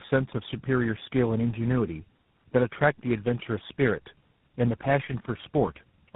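Speech that sounds rough, muffled and warbly from start to finish, with nothing above about 3.8 kHz. The pattern points to tandem speech coding: the call seems to have been decoded and re-encoded by four speech codecs in a row, likely GSM full rate, AMR-NB, G.726 and GSM full rate again, joined by G.711 links. Each coder compresses the already degraded output of the previous one, so the distortions stack.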